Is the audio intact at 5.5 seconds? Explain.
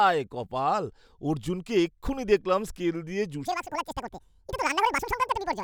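No. At 5.5 seconds the speech is in a stretch of audio read two samples at a time, which runs from 3.45 s, just after "এক্ষুণি দেখলাম স্কেল দিয়ে", to the end of the clip. The player treats each pair of samples as one frame. This fits a wrong guess of two channels or double-width samples. The speech plays at twice its speed and a full octave, 12 semitones, higher.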